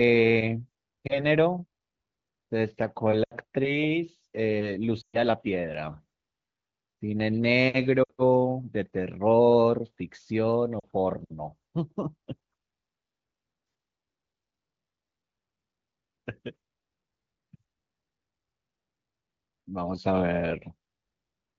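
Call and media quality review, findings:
Lost AMR speech frames at 1.07, 3.23, 5.01, 8.04 and 10.80 s: brief dip or warble at 1.07 s, drops to near silence in the longer runs. Worst at 5.01 s, where about 120 ms of audio drops to near silence. Radio errors fail frame checksums, and the AMR-WB decoder repeats the last pitch and vocal tract settings with decaying gain.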